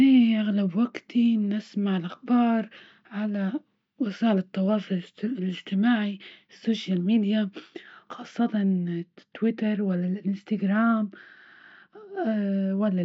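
From 8.38 s to the end at 13.04 s, de-emphasis is applied wrongly: a treble-cutting filter meant to reverse pre-emphasis acts on speech that never received that boost, or takes it off a second time. The result is a smooth downward tilt in the response, reaching about 13 dB of loss at 10 kHz relative to 1 kHz. Consonants lose their edge, and the speech turns dull and muffled, as if heard through a thick cloth.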